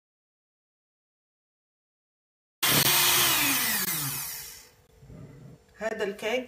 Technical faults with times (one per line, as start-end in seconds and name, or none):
2.83-2.85 gap between chunks
3.85-3.87 gap between chunks
4.87-4.89 gap between chunks
5.89 gap between chunks